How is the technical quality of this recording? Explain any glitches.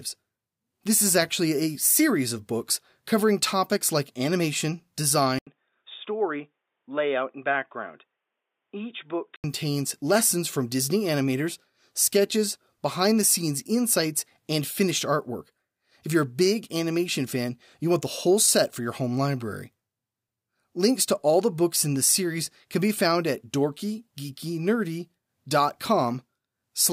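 One glitch. After "covering topics like animation", at 5.39 s, an 80 ms gap precedes dull, slightly quieter audio with nothing above 3.7 kHz and a new faint noise floor, until "lessons from" at 9.44 s. The likely cause is an input switched to a poorer device; the gap and changed noise set it apart from a simple filter.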